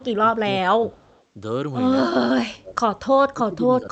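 A speech recording in which the echo canceller on the call appears to have lost track of who was talking, most likely because both sides spoke at once. The result is speech suppressed in double talk: the voice is pushed down by about 20 dB from 0 to 1.01 s, by about 25 dB from 2.17 to 2.77 s, and again by about 20 dB from 3.3 s to the end, sounding dipped each time. The same canceller also likely failed to remove all of the loudspeaker pickup, producing an echo leak from 0.99 to 1.23 s. There a faint copy of the voice returns 190 ms late, roughly 35 dB below the main speech. Throughout, the speech is band-limited, with no content above about 8 kHz, which fits an Opus call path running at a 40 kbps setting.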